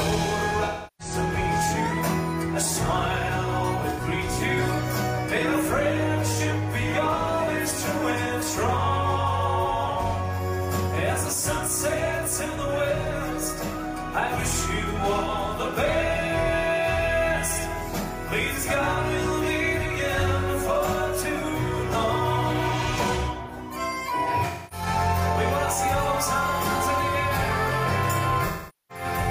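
AAC frame loss with concealment occurs at 0.65 s, 3.89 s, 24.44 s and 28.47 s, lasting about 0.34, 0.09, 0.26 and 0.43 s. The decoder repeats the last good spectrum with scrambled phase, producing smeared, noisy patches. These show as blurred, frozen bands on a spectrogram and a sagging waveform envelope.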